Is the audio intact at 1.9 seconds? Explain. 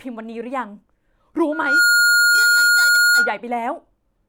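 No. Loudspeaker feedback squeal runs from 1.52 to 3.39 s. A microphone re-amplifies its own loudspeaker, so a 1.4 kHz tone swells in about a third of a second to about 10 dB above the speech.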